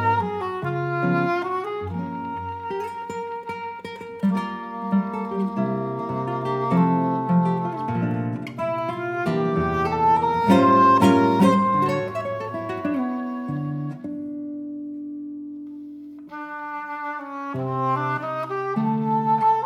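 No technical faults can be heard anywhere in the audio; the signal stays continuous and steady throughout.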